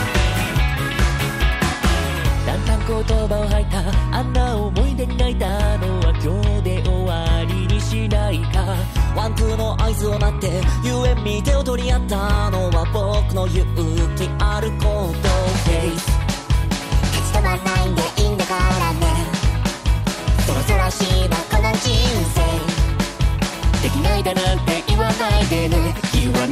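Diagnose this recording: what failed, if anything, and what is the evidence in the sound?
Dropped buffer (overrun) at 5.49, 10.17 and 20.49 s, at the driver or buffer stage. Each point has the sound jumping forward and no gap of silence, roughly 10 ms missing each time. The likely cause is the capture software falling behind, so the hardware overwrote a block of samples before it was read, and the audio on either side was spliced directly together, leaving a discontinuity in the waveform.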